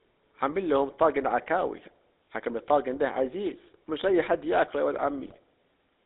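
From start to finish the speech passes through the GSM full-rate codec, whose damage is plainly audible. The codec rebuilds the voice from a vocal-tract filter driven by a coarse pulse train, and the sound fits a 13 kbps GSM stream, with a buzzy, gravelly roughness. On a spectrogram, energy sits only between 250 Hz and 3.7 kHz, with nothing above that ceiling, and the harmonics look grainy and smeared rather than cleanly striped.

From 5.24 to 5.38 s, GSM bit errors break through. Corrupted bits reach the decoder, so the filter, pitch and gain values go wrong for several consecutive frames. Over those frames the speech turns into squawks, pops and a gargling warble. The waveform shows abrupt level spikes and jagged bursts that don't follow the speech envelope, while the spectrogram shows vertical smears and misplaced bands of energy that break the formant pattern for that short stretch.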